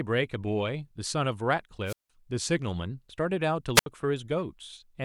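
At 1.85 to 2.10 s and again at 3.75 to 3.86 s, the speech suffers a wireless microphone squelch dropout. The radio signal fades, hiss rises, and the receiver mutes for about 170 ms and then 72 ms. Waveform and spectrogram show brief broadband noise, then flat near-silent gaps.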